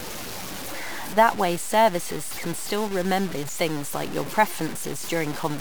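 The speech was likely reduced to about 5 bits and truncated without dither, so every sample snaps down to one of very few levels and the error follows the signal. Across the whole clip this low bit depth without dither shows as a coarse, grainy distortion, roughly 10 dB below the speech, that changes in texture with each sound, while the quietest passages and decaying tails sputter between steps or drop straight to silence.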